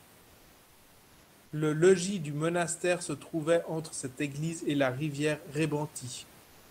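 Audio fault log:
6.43 to 6.70 s, comfort noise in place of the background: for the final 0.28 s the room noise, about 29 dB below the speech, gives way to a steady, featureless hiss about 2 dB quieter, likely from discontinuous transmission. Unlike a gate or dropout, sound continues, only smoothed.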